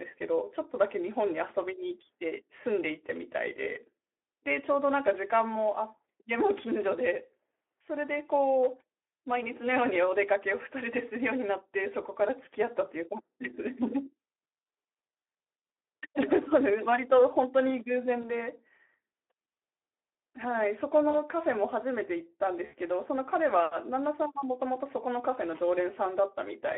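Throughout, the Speex codec is plainly audible: the speech sounds hoarse and grainy, consistent with roughly 11 kbps, where too few bits describe the excitation. It is confined to a 300 Hz to 3.4 kHz line band, so a spectrogram shows nothing above 3.4 kHz and smeared harmonics.

At 18.21 to 18.30 s, 21.09 to 21.22 s and 22.65 to 22.74 s, VoIP packet loss concealed by the speech codec stretches the last sound into a buzzy tone or coloured noise that fades. This fits about 20, 40 and 80 ms of missing audio. Each shows as a flat smear with a decaying waveform envelope.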